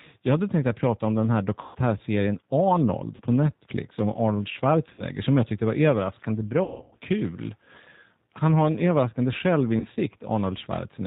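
Throughout, the speech sounds rough, band-limited and slightly synthetic, with nothing above 4 kHz. This is plainly audible G.729 codec damage from 8 kbit/s model-based coding. At 1.61 s, after "prata om den här", the voice smears into a fading buzz for about 140 ms. Similar buzzy smears follow at 3.16 s and 4.94 s, about 40 ms each. From 6.64 to 6.94 s, after "jag tyckte var överraskande", the voice breaks up repeatedly, with one stretch of about 160 ms. From 9.80 to 9.97 s, after "har en överraskande", it breaks up more briefly. These are VoIP packet losses concealed by the speech codec, which extrapolates the last pitch and filter and lets them decay.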